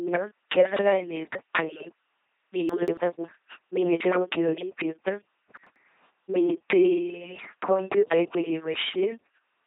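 LPC-10 vocoder coding runs through this whole speech clip, leaving a buzzing, mechanical robot voice with nothing above about 3.8 kHz. At 2.4 kbit/s, a ten-pole vocal tract filter is driven by either a pulse train or noise, so every moment is forced to be fully voiced or fully unvoiced. Chunks out of order occur at 2.69–2.97 s and 5.57–5.76 s. In each, a 93 ms block plays late, two blocks behind in the first and one in the second, producing a jumbled moment with hard joins.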